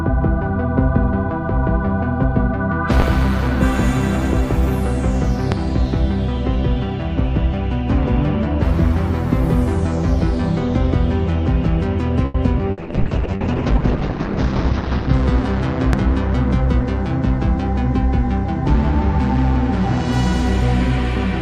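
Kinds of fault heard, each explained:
Loud pop: A sudden voltage step or pulse, likely from a plug, switch, static discharge or driver glitch, gets added to the signal and shaped by the circuitry after it. Here it shows as three separate single pops at 3.00, 5.52 and 15.93 s, each lasting under 40 ms and peaking well above the surrounding level, on the order of 15 dB. The sound continues underneath each pop.
Short stall from a late packet: A packet arrived after its playout time, so the jitter buffer ran dry and the receiver had to bridge the gap by stretching the last bit of audio it had. At 12.25 s that stretch lasts about 90 ms. The sound hangs and holds unnaturally before picking up again from exactly where it left off. Nothing is lost, but the added delay pushes everything after it about 90 ms later.
Skip ahead: The jitter buffer, now holding more audio than it needs after the stall, discards a stretch to catch up, and playback jumps forward to audio that was already waiting. 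At 12.58 s roughly 70 ms of sound vanishes, with only a 10 ms join covering the splice. The two sides butt together almost directly, clipping off a small piece of what was playing.
Burst of packet loss: Several consecutive packets never made it in time, so the receiver extended the last sound it had and faded it down while waiting. At 12.71 s about 60 ms is missing. Concealment fills the gap with a held, decaying continuation, giving a brief buzzy or hissy smear. The audio then resumes further on, with the intervening material gone.
Call bitrate drop: The connection's bandwidth estimate collapsed, and the encoder was instructed to go from 128 kbps down to about 7 kbps. At that rate it codes far more coarsely and narrows the audio band from 20 kHz to 8 kHz. From 12.75 s the sound turns muffled, rough and watery, staying at its worst for about 2.3 s before recovering by 15.19 s.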